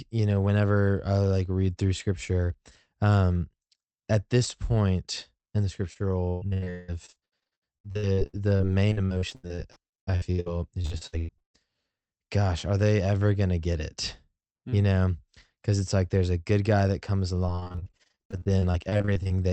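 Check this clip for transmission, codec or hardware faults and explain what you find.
Yes, repeated packet loss (robotic sound) occurs twice: from 5.93 to 11.56 s, right after "this point in the", and from 17.46 to 19.31 s, after "good guy that comes". Dozens of lost packets in quick succession were each patched by extending the preceding sound, so about a third of each stretch is filler. This makes the sound choppy, with pieces missing. The first stretch has gaps up to 179 ms long, while the second has gaps up to 40 ms. What separates this from a single dropout is the rapid, repeating chain of concealed gaps rather than one isolated hole. Throughout the clip, the call path's codec limits the high frequencies to around 8 kHz.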